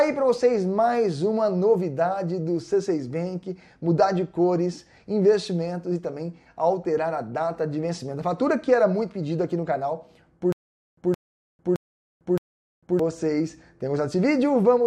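From 10.52 to 12.99 s, a 168 ms burst repeats four times at an even 617 ms pace, each followed by 449 ms of dead silence. This stutter with silent gaps is likely a stalled stream replaying its last fragment on every retry, so the audio meant for that stretch is lost.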